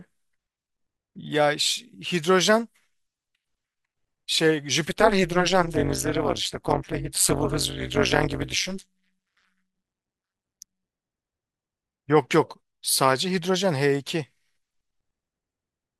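Speech in which windowed frames were reassembled with an overlap that does not sum to constant gain, causing overlap-add ripple from 4.89 to 10.90 s. The level dips by about 60 dB once per frame, around 200 times a second, producing a harsh, metallic buzz.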